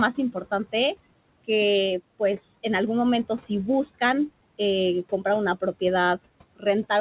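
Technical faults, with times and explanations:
Throughout: noise suppressor artifacts. The suppressor keeps estimating the room noise and pulling those bands down, by about 21 dB, frame by frame. The background, which sits about 18 dB under the speech, drains away in the gaps and swells back whenever speech starts, so the residue pumps instead of staying steady. The speech sits in a band that stops at 4 kHz, which points to a narrowband G.711 call path.
6.56 to 6.66 s: speech cut by the noise suppressor. Here the suppressor mistakes a stretch of quiet speech for noise and turns it down with the background, dropping it by as much as about 19 dB for roughly a tenth of a second. That sound seems swallowed, fading abruptly and then coming back, because the gain was cut on speech the suppressor should have let through.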